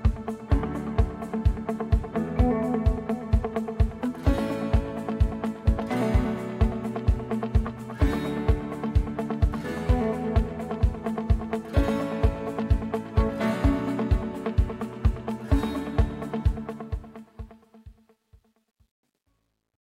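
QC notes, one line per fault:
16.42–19.91 s, truncation distortion on a fade: as the fade-out drops toward silence, the gain stage keeps too few bits and adds no dither. The grit, consistent with roughly an 11-bit word length, is worst between 17.83 and 19.91 s. On a waveform, the tail collapses into coarse square steps. A spectrogram shows broadband harmonic hash where smooth decay should be.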